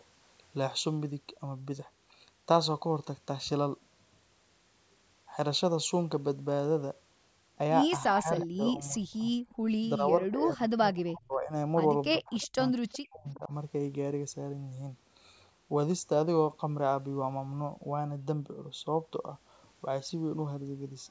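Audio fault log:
8.21–9.33 s, 9.98–11.53 s and 12.2–13.52 s, speech suppressed in double talk: the voice repeatedly sinks and breaks into pieces, falling by roughly 30, 25 and 40 dB at its deepest. This is likely an echo canceller that could not separate this talker from loudspeaker echo while both sides spoke, so it pulled everything down.
8.42–8.47 s, 9.49–9.55 s, 12.41–12.48 s and 12.89–12.99 s, echo leak: short, faint scraps of a delayed copy of the voice appear 363 ms behind the original, roughly 15 to 30 dB below it. The likely cause is a far-end echo canceller that left part of its loudspeaker pickup in the return path.
9.61–9.69 s, background gated by the echo canceller: the room sound drops out for about 70 ms, falling about 23 dB before returning. The canceller clamped the microphone hard while the loudspeaker was active, then released it.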